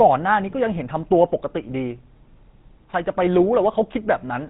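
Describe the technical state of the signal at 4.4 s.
At 4.4 s the speech is still passing through the GSM full-rate codec that colours the whole clip, from start to finish. The codec rebuilds speech from a vocal-tract model excited by sparse, evenly spaced pulses, with a plainly audible loss that fits a 13 kbps coding rate. That thin excitation gives the voice a buzzy, gravelly roughness, and with nothing left above 3.8 kHz the sound is narrow and dull, lacking crisp sibilance.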